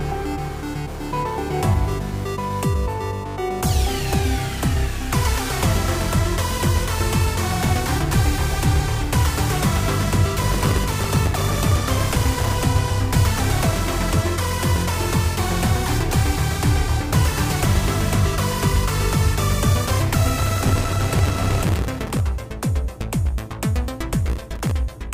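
Bursts of gritty crackle tear through the sound from 10.40 to 12.64 s, again from 20.39 to 22.20 s, and briefly from 24.28 to 24.71 s. This is processor overload crackle. The processor repeatedly missed its deadlines for small audio buffers, and each missed buffer dropped out as a tiny silent gap with hard edges. The density of the clicks suggests buffers of about 1.5 ms, with a couple of hundred missed in each longer burst.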